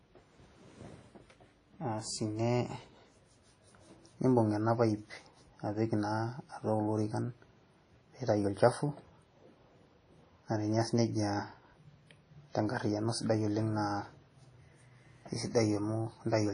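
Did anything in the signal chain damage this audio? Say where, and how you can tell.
Yes, at the codec stage, all the way through this speech. The top stops dead at 10.1 kHz, and there's a washy, ringing hiss that swells and fades with the sound. That's likely WMA compression, at a rate that fits around 32 kbps, smearing quantisation noise across long transform blocks.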